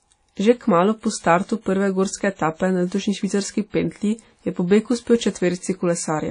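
Throughout, the speech was likely passed through low-bitrate WMA compression, leaving nothing above 10.1 kHz and a ringing, washy hiss breathing with it.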